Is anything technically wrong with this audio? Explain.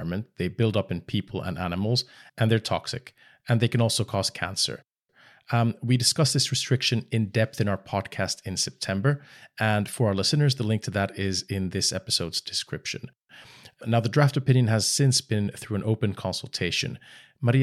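No, the speech signal comes through intact, with nothing in it that points to a technical fault.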